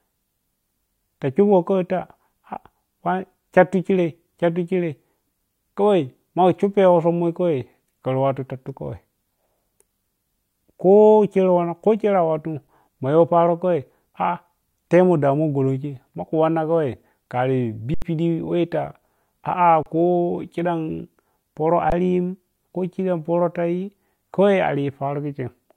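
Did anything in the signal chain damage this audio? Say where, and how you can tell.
Yes, at the driver or buffer stage: an underrun with held sample, four times. The converter froze on its last value, flattening the speech at 12.67 s before "ma yow", 17.94–18.02 s, 19.83–19.86 s and 21.90–21.92 s. Each time, some live audio was lost before the speech returned.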